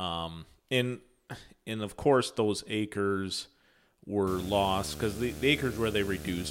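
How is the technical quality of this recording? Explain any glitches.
The recording has one clear fault, a video or display buzz that enters at 4.27 s and runs to the end of the clip. Interference from a screen or video cable has leaked into the audio path, bringing in a hard buzz at the 75 Hz field rate of the display, with a gritty hash of harmonics stacked above it. It sits prominently under the speech, only around 10 dB below it, so it is easy to hear.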